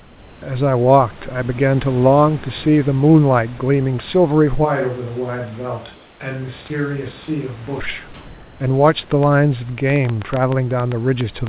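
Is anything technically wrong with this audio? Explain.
Yes, there are two faults, heard over a telephone-band call path whose cutoff at 4 kHz fits 64 kbps G.711 A-law, with room noise about 28 dB below the speech.

From 5.94 to 6.20 s, a 260 ms stretch of comfort noise replaces the background. The sender likely stopped transmitting during a pause, and the receiver filled the gap with synthetic noise. The real room texture gives way to a flat, featureless hiss, about 2 dB quieter, sitting roughly 31 dB below the loud parts. Unlike a dropout or noise gate, it never falls to silence, and it lacks the room's natural detail.

From 9.23 s to the end at 11.49 s, a train of clicks runs over the sound at about 6.4 per second, unevenly spaced. Each is a short, sharp pulse of much the same shape, peaking roughly 10 dB above the signal. The likely cause is interference from nearby equipment or a faulty connection or power supply. 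Unlike codec crackle or packet-loss glitches, the clicks stay alike, keep going through pauses and ignore the speech.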